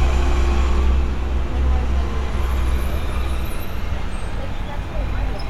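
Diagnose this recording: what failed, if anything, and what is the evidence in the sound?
Nothing failed; no stage shows any audible fault.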